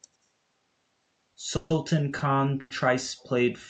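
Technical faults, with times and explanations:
1.56 to 1.72 s and 2.60 to 2.72 s, call audio freeze: the last sound is held as a fading buzz for 140 ms, then 100 ms, likely from packets delayed until the jitter buffer ran dry.
2.18 s, short stall from a late packet: a 20 ms stretched, slightly buzzy sound where one packet arrived late, then speech resumes from the same point.
3.19 to 3.25 s, echo leak: a faint delayed copy trails the speech by about 121 ms at a very low level, likely loudspeaker pickup the far-end echo canceller missed.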